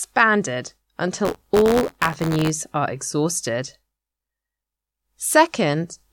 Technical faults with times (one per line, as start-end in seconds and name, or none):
1.24-2.50 buffer tearing